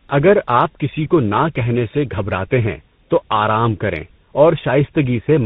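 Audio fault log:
Throughout: tandem speech coding. The speech went through two speech coders in a row, which fits GSM full rate followed by CVSD, so the second coder had to re-encode the first one's errors. That stacks into a rough, warbly, muffled sound with nothing above about 3.8 kHz, worse than either coder would produce alone.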